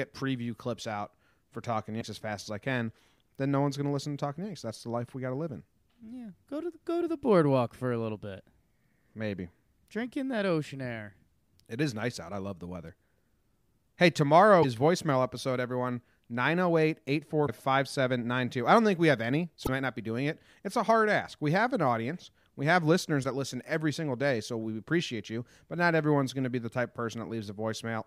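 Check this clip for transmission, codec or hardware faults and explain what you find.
The speech carries one fault, damaged data in a compressed stream, occurring five times: 1.97–2.02 s, just before "as fast as I"; 14.59–14.65 s; 17.44–17.49 s; 19.63–19.69 s, between "think we have any" and "might not be doing"; and 23.22–23.25 s, after "have listeners". Corrupted bytes make the decoder misread frames and lose sync, producing brief 34–56 ms glitches. Unlike network dropouts, which leave gaps or smeared concealment, these come from corrupted data inside the stream itself.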